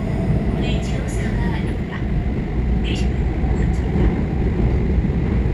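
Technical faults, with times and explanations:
1.64 s to 5.53 s, time-stretched section: the sound abruptly runs about 1.68 times faster at unchanged pitch, turning rushed, likely from software squeezing it by dropping short pieces. Spectrograms show harmonics at the same heights but compressed in time, with small seams where pieces were cut.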